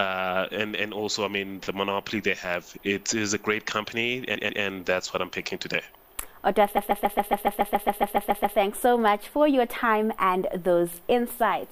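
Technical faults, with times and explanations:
4.34–4.62 s: repeated frames. A 139 ms block of compressed audio plays three times in a row, adding about 0.28 s. It stutters as the same fraction of a second repeats.
6.76–8.57 s: repeated frames. The same-length block loops fourteen times, adding 1.8 s of stuck repetition.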